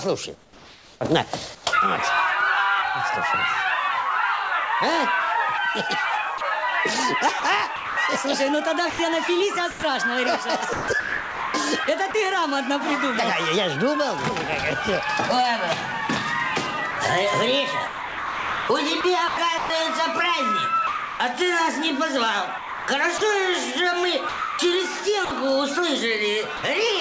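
From 0.35 s to 1.64 s, comfort noise stands in for the background. For about 750 ms of that stretch the real ambience, with its texture and small movements, gives way to a steady, featureless hiss. The likely cause is discontinuous transmission: the sender stopped sending while nothing was detected, and the receiver filled the gap with synthetic noise that only roughly matches the original spectrum. Across the whole clip the audio stops at about 8 kHz, consistent with a G.722 call path.

Sound chopped by the voice detector then appears three times, at 6.38–12.14 s, 16.91–21.20 s and 22.58–26.63 s. In these stretches the detector likely toggled between sending and muting several times. Quiet onsets, tails and low-level passages are cut and replaced with generated noise, about 1.23 s, 1.44 s and 0.75 s in total respectively. The result is choppy, clipped edges.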